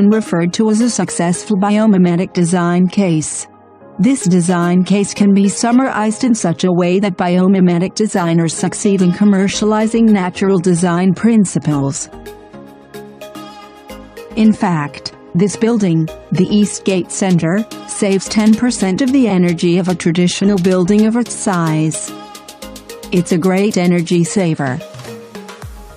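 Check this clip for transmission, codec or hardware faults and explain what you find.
No transmission, codec or hardware faults can be heard here.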